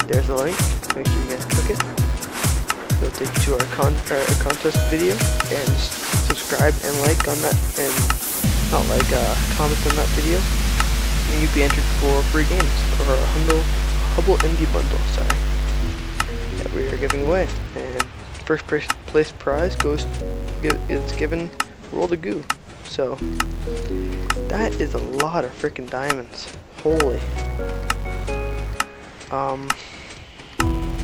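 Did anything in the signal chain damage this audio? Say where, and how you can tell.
Yes. A filter in the block-based processing stage is restarting from silence on every block and losing its state, so each block opens with a small transient. Throughout the audio this produces a 200 Hz buzz, one tick every 5 ms, that rises and falls with the signal's level.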